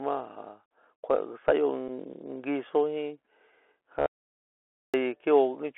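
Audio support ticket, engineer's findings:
Bluetooth CVSD headset codec, whole clip. Speech band-limited to roughly 250 Hz to 3.4 kHz, nothing above 4 kHz. Scratchy s sounds, loud bright passages distorted, granular hiss under the speech. The 1-bit delta modulator's step can't track fast high-level changes. Unlike mSBC wideband or a lossy codec's swirl, the hiss is grainy and constant and the distortion rises with loudness, consistent with a 64 kbps CVSD link.

Bluetooth headset packet repeated, 1.88 s. Brief buzz, about 7.5 ms of audio replaced, which fits two consecutive lost packets. Headset chip re-decoded the previous packet's bits instead of true audio. A dropout would leave silence, and a digital click would be a single sample. This is a short repeated fragment. The repeat every 3.75 ms gives a buzz near 267 Hz until good packets return.

Audio dropout to silence, 4.06 to 4.94 s, about 0.88 s. 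Speech cuts off mid-flow and returns abruptly. The gap is silent with no room tone. The audio input was likely lost, with the recorder writing silence meanwhile. A gate or packet loss concealment would leave residual noise or repeated fragments. Here the gap is silent and whatever was spoken in the gap is unrecoverable.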